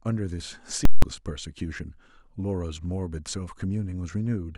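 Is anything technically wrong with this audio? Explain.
Yes. From 0.85 to 1.02 s, about 170 ms, the speech gives way to invalid numbers at full scale. A calculation produced infinite or invalid values that clamp to the maximum level, which fits an 8192-sample block. It's heard as a loud pop at each edge with silence between. The waveform shows a flat bar pinned at one extreme value, far beyond the speech peaks, and the spectrogram shows bright broadband lines at both edges with nothing between.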